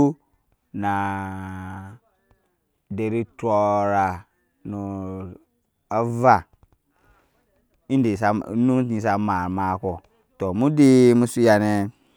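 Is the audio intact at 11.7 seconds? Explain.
Yes, the speech at 11.7 seconds is intact, with no dropout, click, distortion or other fault audible at that moment.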